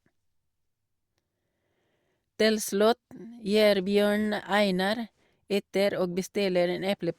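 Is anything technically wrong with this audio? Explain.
No, nothing technically wrong stood out on listening to this speech recording.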